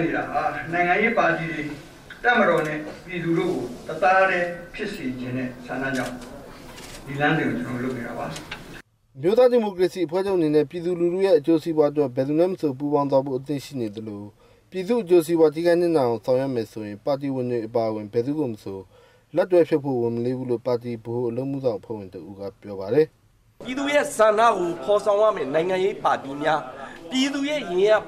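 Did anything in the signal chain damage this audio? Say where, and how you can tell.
No, nothing in the signal chain can be heard damaging this audio. No stage from capture to playback leaves a mark anywhere in the clip.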